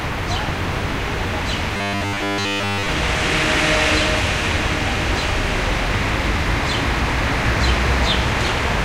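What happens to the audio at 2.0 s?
At 2.0 s the sound is caught in a stretch of robotic sound from repeated short buffers, running from 1.77 s to 2.89 s. It takes on a rigid, metallic buzz at 100 Hz. That pitch fits a 10 ms slice being replayed over and over. The likely cause is new audio arriving too seldom, with the gap filled by repeats. Most of the stretch is repeated material, so the real audio underneath is largely skipped.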